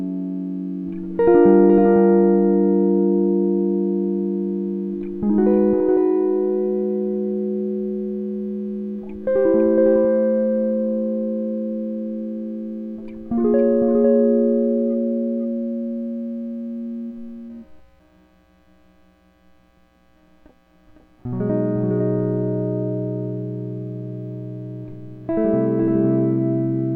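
A half-second echo shadows everything in this music clip, from start to finish: each passage returns a second time at a somewhat lower level, about 5 dB down, full-band and with no decay or room colour. That is a doubled audio track, the same material mixed in twice with a fixed offset of roughly half a second. The likely cause is a second capture of the signal through a slower path, or an edit that left two copies out of step.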